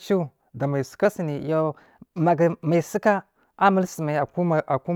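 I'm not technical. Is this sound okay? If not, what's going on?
No. From 1.05 to 4.21 s, just after "da mai", a wrong sample rate makes the speech play about 9% fast and sound slightly higher-pitched.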